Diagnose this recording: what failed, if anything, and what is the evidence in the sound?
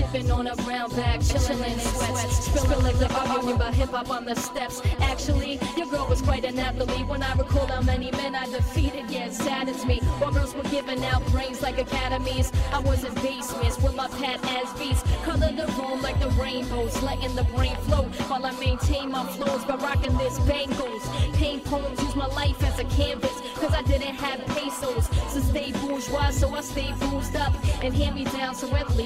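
From 1.30 s to 3.56 s the sound is doubled: a second full-band copy at roughly the same level trails about 150 ms behind, dry and uncoloured, and cuts in and out abruptly. This doubled audio track likely comes from a second, slower capture route or an edit leaving two copies out of step.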